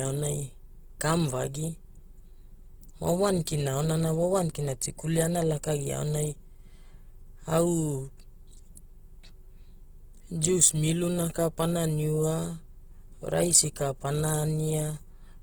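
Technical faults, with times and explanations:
throughout: Opus compression. The speech carries plainly audible codec damage: tonal parts of the speech turn rough, grainy and noisy rather than swirling, because band energies are kept but their fine detail is filled in by folded or noise-like content once bits run short. Content still reaches about 20.1 kHz, so the bandwidth has not narrowed. The character points to a low rate near 16 kbps, likely in Opus's transform-based music (CELT) mode.
3.45 s: pre-echo. A brief hiss of about 18 ms sits just ahead of a sharp attack, which sounds soft or smeared. The transform codec spread quantisation noise across the whole block, and because the attack fell late in that block, noise sized for the loud onset also spilled into the quiet moment before it, where nothing masks it.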